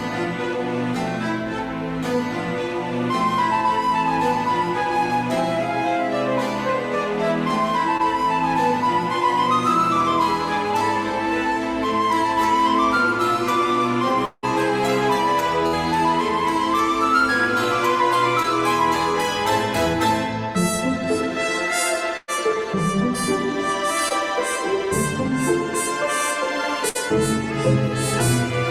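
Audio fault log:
7.97–8.01 s, short concealed packet loss: about 20 ms of audio arrived too late, so the receiver extended the preceding sound to bridge it, leaving a brief smear.
14.25–18.46 s, scattered short gaps: roughly three separate losses totalling 260 ms, the longest around a fifth of a second, each patched by continuing prior sound, causing hiccups.
22.17–26.97 s, scattered short gaps: about three dropouts adding up to 200 ms, none much beyond 100 ms, filled by extrapolation, heard as brief ticks and smears.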